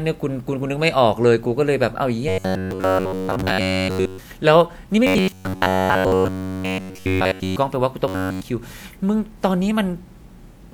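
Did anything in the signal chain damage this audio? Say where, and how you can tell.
Yes: a rigid, metallic 93.8 Hz buzz replaces the speech at 2.29–4.18 s, 5.07–7.56 s and 8.08–8.42 s. This is robotic sound from repeated short buffers, likely a starved driver buffer looping about 10.7 ms.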